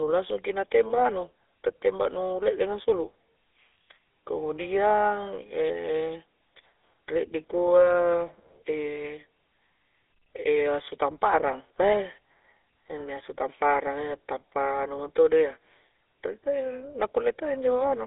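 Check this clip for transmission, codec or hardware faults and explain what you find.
There's one fault, and it runs the whole way through: the speech has been through a GSM full-rate codec. The band sits at roughly 300 Hz to 3.7 kHz, nothing above 3.8 kHz, and the damage is plainly audible. The codec rebuilds the voice from a vocal-tract model driven by coarse, regularly spaced pulses, which fits a 13 kbps stream, so you hear a buzzy, gravelly roughness over everything.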